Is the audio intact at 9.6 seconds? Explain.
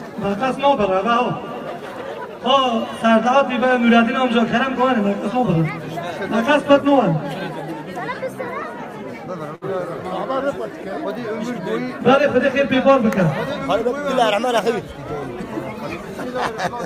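No, there's a burst of packet loss from about 9.55 to 9.64 s. Several packets went missing in a row, so the receiver stretched the last bit of sound out for roughly 60 ms, fading it down as a held buzz or hiss. Then the audio picks up again with about 60 ms simply gone.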